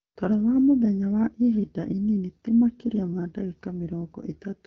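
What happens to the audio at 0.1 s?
A smooth, even hiss replaces the real background from 0.01 to 0.15 s, switching in and out abruptly. This is AMR comfort noise: the phone judged the talker silent, sent no speech frames for 140 ms, and the receiver synthesised filler from a coarse level-and-spectrum sketch.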